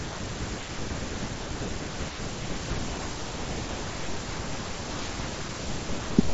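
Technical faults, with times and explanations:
Nothing stood out on listening to this speech, which comes over a Bluetooth mSBC headset link with its top end stopping a little below 8 kHz, as that wideband headset codec should.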